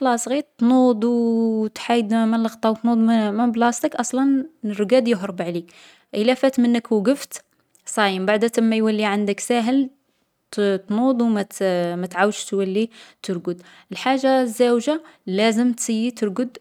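No technical faults occur at any point in this speech recording.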